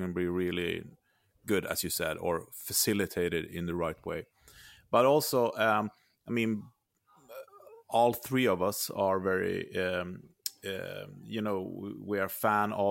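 No technical faults can be heard anywhere in this recording.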